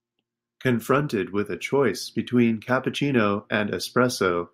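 No technical faults are audible.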